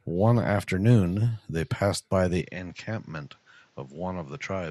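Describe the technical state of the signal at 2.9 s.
At 2.9 s the recording is on a poorer input, most likely a switch to another device, in place from 2.41 s to the end at 4.70 s. The speech arrives roughly 10 dB quieter and band-limited, with nothing above 7.6 kHz, so it sounds duller over a faint new noise floor, with no gap at the switch.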